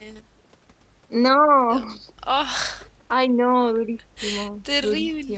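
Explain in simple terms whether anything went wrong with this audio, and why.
Nothing went wrong; this speech sounds like a normal call.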